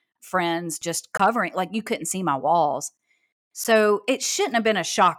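Two gaps break up this speech clip: a drop-out lasting about 21 ms from 1.17 to 1.20 s, between "friends just" and "like you couldn't see", and a shorter tick at 3.64 s, about 12 ms long. Both are blocks of digital silence. The output buffer was likely not filled in time, so the samples were zeroed and the sound cut out and back with no fade. The first gap's length fits a 1024-sample buffer.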